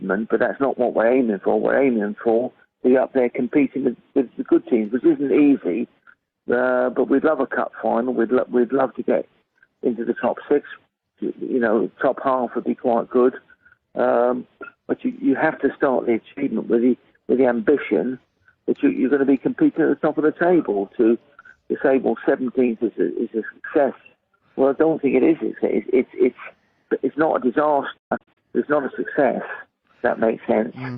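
At 27.98 s the sound breaks into a digital broadcast dropout lasting until about 28.38 s. The receiver stopped getting usable frames and muted, so the sound drops out in several short holes spread over about 384 ms, totalling about 224 ms of silence, roughly seven lost frames; the longest gap is 128 ms. Each cut fades in about 8 ms. Unlike analogue reception fading, there is no rising hiss or gradual weakening; the sound is simply missing and then resumes intact.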